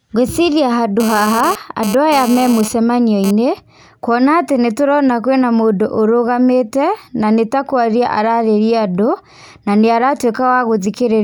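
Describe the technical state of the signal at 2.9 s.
A hard, raspy buzz at about 217 Hz with a dense stack of harmonics sits under the speech from 1.00 to 3.31 s, about 11 dB below it. This is GSM phone buzz: a nearby phone transferring data pulses its transmitter, and the audio circuitry rectifies those bursts, so the buzz comes and goes.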